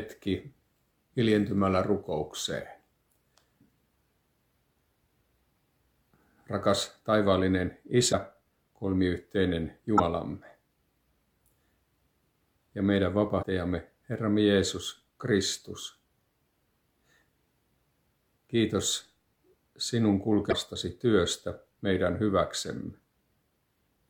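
A likely broken MP3 bit reservoir, where lost frames leave the next frame reading the wrong bytes, makes the sound jump and blurt a brief chirp, burst of noise or short hole at 8.11–8.14, 9.97–10.00, 13.42–13.44 and 20.49–20.53 s.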